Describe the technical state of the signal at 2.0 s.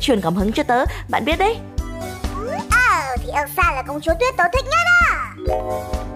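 At 2.0 s the signal is intact, with no audible dropout, distortion or other fault at that point.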